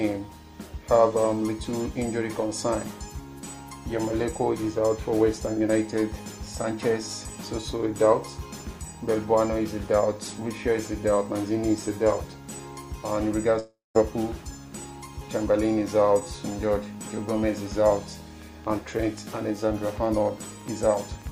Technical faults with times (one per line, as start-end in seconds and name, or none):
13.59-13.97 long network dropout
18.42-21.28 train of clicks